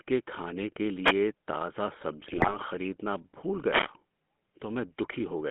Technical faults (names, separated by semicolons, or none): GSM full-rate codec; wireless microphone noise hit; GSM bit errors